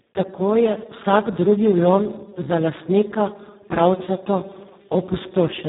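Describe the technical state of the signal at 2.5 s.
At 2.5 s the speech carries heavy Speex codec damage, present throughout the clip. Too few bits reach the excitation, which fits a bitrate near 4 kbps. The voice sounds hoarse and noisy. Nothing is heard above 3.8 kHz.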